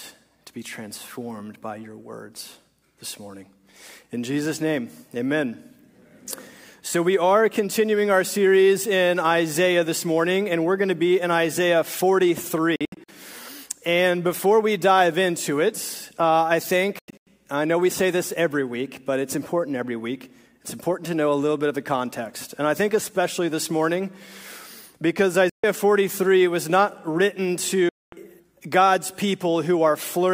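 Four gaps cut into the sound, at 12.76 to 13.09 s (several short holes, the longest about 70 ms), 16.99 to 17.27 s (holes up to about 93 ms), 25.49 to 25.64 s and 27.89 to 28.13 s. These are likely Bluetooth dropouts, where packets arrived too late and were discarded. Each hole is sudden silence, a blank vertical strip on a spectrogram and a flat line in the waveform. The audio then resumes as though it had kept playing.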